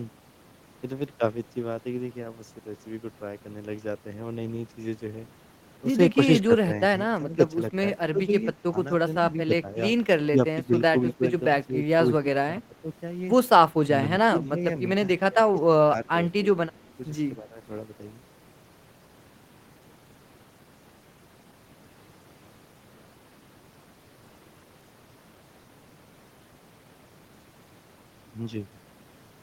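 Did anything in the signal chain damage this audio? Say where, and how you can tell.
Yes, at the call-processing stage: speech suppressed in double talk, most likely from an echo canceller that could not separate near speech from loudspeaker echo. The speech dips at 7.19–7.38, 8.12–8.32, 9.31–9.77, 10.31–12.75, 14.32–14.59 and 15.18–17.58 s. The shallowest dips are about 5 dB, and the two longest stretches reach about 15 dB. On a waveform the envelope sags in patches, and a spectrogram shows those same spans fading across the band.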